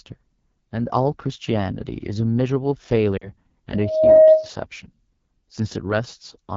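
The whole recording passes through the AMR wideband (HD Voice) codec at one of its lowest modes; the plainly audible roughness points to about 8.85 kbit/s. With so few bits, the pulse-driven vocal tract model leaves the speech raspy and gritty, and the band above 6.4 kHz is filled with shaped noise.

From 3.18 to 3.29 s, lost AMR speech frames force the decoder to reuse its last good pitch and vocal tract settings at falling gain. The 40 ms gap, which fits two lost frames, sounds like a brief drop to near silence before the speech returns thin and rough.

From 3.75 to 4.50 s, a loudspeaker feedback squeal develops as the microphone picks up its own loudspeaker and the loop gain exceeds one at 628 Hz. That single tone swells over a little under half a second into a howl about 15 dB above the speech.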